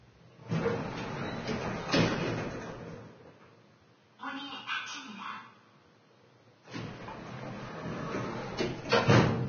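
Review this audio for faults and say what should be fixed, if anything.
Throughout, grainy hiss, blurred attacks and nothing above 6.5 kHz, seen as a sharp spectrogram ceiling with speckled treble, likely point to heavy Vorbis compression at roughly 18 kbps. Encode from the original source at a much higher Vorbis quality setting, or keep an uncompressed master.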